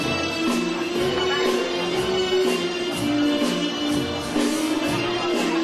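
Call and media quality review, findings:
No faults found in the reviewed media. Nothing in the clip calls for follow-up on this ticket.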